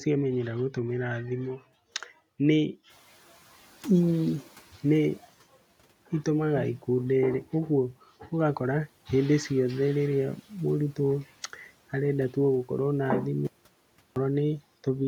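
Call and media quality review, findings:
Noise suppressor catching up, 2.89–5.24 s. Room noise jumps about 16 dB around 3 s and passes through under-suppressed, then sinks by about 9 dB over roughly 2.35 s as the suppressor's noise estimate adapts. The noise then sits about 27 dB below speech.

Audio dropout to silence, 13.47–14.16 s, 0.69 s long. Sound cuts to silence mid-flow with no room tone, and the speech in the gap is lost. Likely input loss (device disconnect, link failure or mute) while the encoder kept writing silence.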